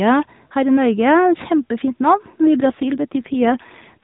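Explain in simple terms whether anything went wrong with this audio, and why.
At 2.56 seconds the phone network forced an AMR rate drop. The mobile speech codec, which runs at its normal quality up to then with only light coarsening, had to switch to a much lower data rate, probably because the radio link weakened, and spend more of its bits on error protection. From there to the end, the speech sounds rougher, buzzier and more artificial, though it doesn't get any more muffled and it doesn't cut out.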